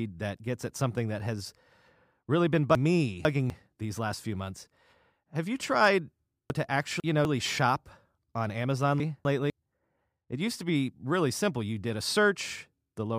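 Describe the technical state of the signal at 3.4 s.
At 3.4 s the signal is inside a chunks out of order fault running from 2.75 to 3.5 s, between "really been" and "these last few months". A 250 ms chunk plays two chunks late, giving a jumbled moment. On a spectrogram, formant tracks break off abruptly at the three hard joins; the waveform shows sudden amplitude jumps there.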